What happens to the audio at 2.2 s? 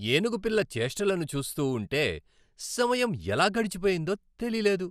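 At 2.2 s the speech carries MP2 compression damage that runs through the whole clip. It sounds dull, gurgling and granular, which fits a low bitrate of around 80 kbps. The likely cause is an MPEG Layer II encoder starving its 32 sub-bands, switching upper bands off and quantising the rest coarsely. A spectrogram shows a ragged, flickering top edge with blocky patches.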